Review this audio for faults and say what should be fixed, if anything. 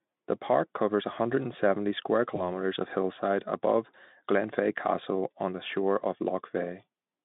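There's one spot worth fixing: VoIP packet loss concealed by the speech codec, around 2.35 to 2.47 s. It sounds like a single dropped 20 ms frame. The Speex decoder papered over the gap by stretching its last pitch and filter state at falling gain, and because each frame leans on the one before, the sound stays weak or distorted for roughly 100 ms before it settles. To prevent it, add in-band redundancy or FEC and give the jitter buffer more headroom so a single late packet doesn't get dropped.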